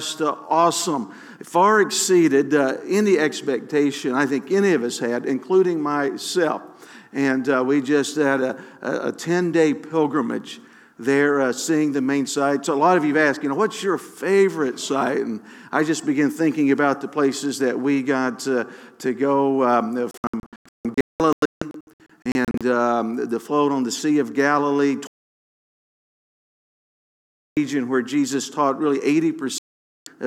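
Three digital broadcast dropouts interrupt the sound, where the receiver mutes while incoming frames are missing or corrupt. From 20.11 to 22.61 s it breaks into scattered short holes totalling 1.34 s, the longest 0.19 s. From 25.07 to 27.57 s there is one continuous 2.5 s silence, and from 29.58 to 30.07 s another of 0.48 s. The hole lengths fit frames of about 32 ms, and the audio from those gaps is lost.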